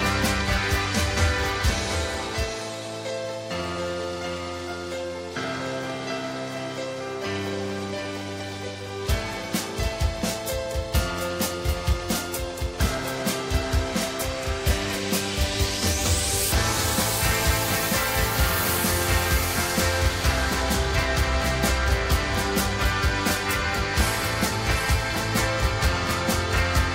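A doubled audio track runs throughout: a full-band copy trails about 0.7 s behind, roughly 5 dB quieter, likely from an edit holding two offset copies, so every waveform event shows a smaller, undecayed twin.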